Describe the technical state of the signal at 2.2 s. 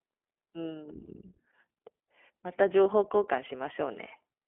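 At 2.2 s, as throughout the clip, the iLBC codec codes each 20 ms frame independently within a 300 to 3400 Hz line band, which fits its 15.2 kbps mode, leaving the speech muffled, rough and plainly synthetic.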